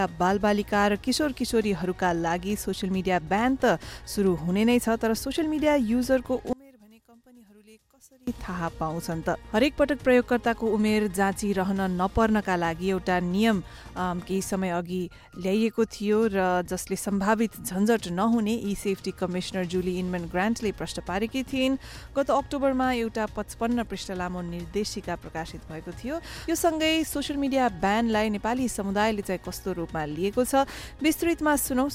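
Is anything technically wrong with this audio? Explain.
Yes. From 6.53 to 8.27 s the level drops by about 29 dB, likely one channel inverted, cancelling shared content when summed to mono.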